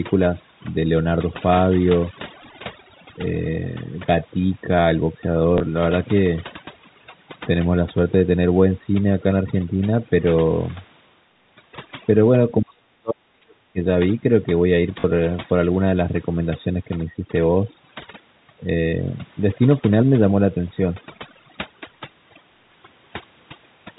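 A speech recording carried over a call path with G.711 mu-law telephone coding, it suffers from three faults. Overdone noise removal runs throughout: the suppressor was set so aggressively that any frequency band sitting near its noise estimate gets pushed far down or switched off, and the softer parts of the voice are removed along with the noise. The background therefore collapses into near silence dotted with twinkling specks. Packet loss with the last packet repeated occurs twice. From 5.58 to 5.60 s a 20 ms gap was filled by replaying the previous chunk of audio. From 15.00 to 15.04 s a 40 ms gap, consistent with two 20 ms packets, was filled the same way. The longer gap also buzzes briefly at about 50 Hz, giving a short robotic stutter. Between 12.62 and 13.77 s the voice dips, dropping by about 40 dB at its deepest and affecting roughly a second of sound in total. This is likely speech suppressed in double talk: with both sides talking at once, the echo canceller could not separate the local talker from loudspeaker echo and turned both down.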